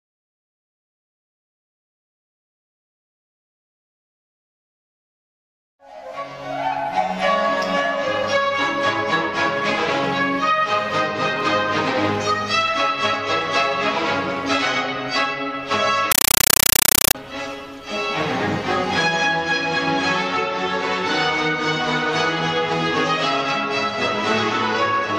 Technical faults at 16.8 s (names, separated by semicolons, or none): compressed stream played as audio